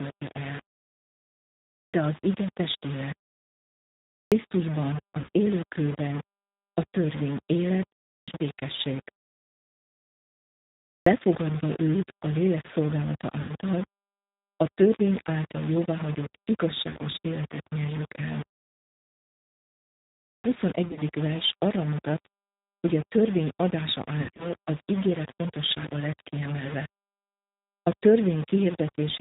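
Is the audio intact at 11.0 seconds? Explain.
No. Right at 11.0 seconds the sound comes out of a pause of about 1.9 s, and there's a clipped start after a pause: roughly 84 ms, from 10.98 to 11.06 s, is simply swallowed. The output device seems to drop into a sleep state during the silence and needs a moment to wake or relock, so the onset jumps in abruptly from nothing, missing its opening sound instead of building up naturally.

That moment also carries the damage that runs through the whole clip. The G.729 codec is audible at 11.0 s like everywhere else. At 8 kbit/s it rebuilds the speech from a vocal tract filter, a pitch predictor and a handful of pulses per 10 ms frame, so nothing above 4 kHz gets through. The result is dull and band-limited, with a plainly audible rough, synthetic quality to the voice.

On top of that there's low bit depth without dither. The grain points to about 5 bits, rounded with no dither, which is likely the cause. 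Because the rounding error tracks the signal instead of being spread out as neutral noise, it comes across either as grainy distortion on quieter stretches or as a fairly steady hiss where the sound is dense. Either way it sits around 15 dB below the signal.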